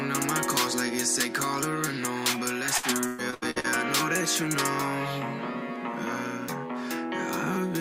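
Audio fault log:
2.77–3.69 s, repeated packet loss (robotic sound): choppy stutter with pieces missing, as rapid dropouts up to 116 ms long are patched by repeating preceding sound.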